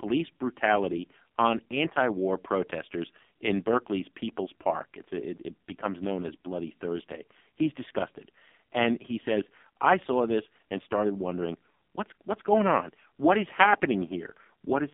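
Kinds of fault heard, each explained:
AMR narrowband mobile codec: the speech has gone through the AMR-NB mobile codec at a low rate that sounds like about 5.9 kbps. At that rate the codec rebuilds the voice from a compact vocal-tract model driven by sparse pulses in short subframes. Here everything above 4 kHz is missing, and the audible band sits roughly between 200 Hz and 3.6 kHz, so the sound is thin and muffled. The heavy coding damage comes through as a buzzy, synthetic quality across the whole clip.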